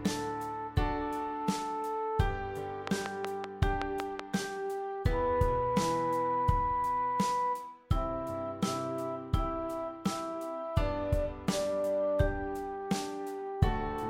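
From 2.87 to 4.21 s there's a train of clicks, about seven regular ticks at 5.3 per second, well above the sound, likely interference from nearby gear.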